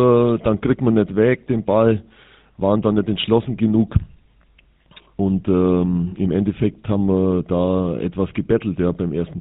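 From the first moment to the last, the speech carries the unmistakable rasp of the GSM full-rate codec, plainly audible the whole way through. The encoder models the vocal tract and feeds it a thinned-out pulse train as excitation, so voicing comes out buzzy and gravelly rather than smooth. Nothing survives above about 4 kHz, leaving everything muffled and phone-like. That level of damage fits the old 13 kbps GSM rate.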